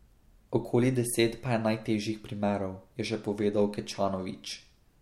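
No technical faults can be heard anywhere in this speech recording. There is nothing to place on a timeline or trace back to a cause.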